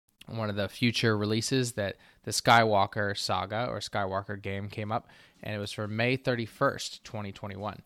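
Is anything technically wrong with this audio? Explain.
No, nothing technically wrong can be heard here.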